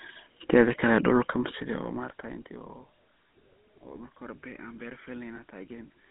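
The whole clip carries the GSM full-rate codec sound: the speech has that buzzy, gravelly roughness from a vocal-tract model driven by sparse, evenly spaced pulses. Everything sits in a narrow telephone band of roughly 200 Hz to 3.5 kHz, which fits the 13 kbps full-rate codec.

At 5.36 to 5.4 s there's a lost GSM frame, a single 20 ms frame. The decoder patches it by replaying the previous good frame's settings, so you get a brief rough, metallic ring before normal speech returns.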